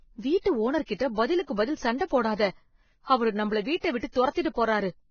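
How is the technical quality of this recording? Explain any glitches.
The recording is heavily degraded by lossy compression throughout. The clip runs start to finish with hiss and grain over the speech, and nothing survives above 6.5 kHz. The damage is severe enough to fit a Vorbis encode at a very low bitrate, around 17 kbps, as the likely cause. The encoder has quantised the upper band so coarsely that its fine detail has turned into noise of similar energy, roughening tones and smearing attacks. A plain low-pass filter would sound dull but clean, whereas this top end sounds noisy rather than missing.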